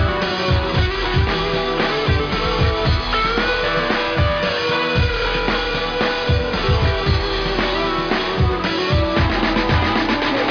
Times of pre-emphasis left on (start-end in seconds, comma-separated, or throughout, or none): none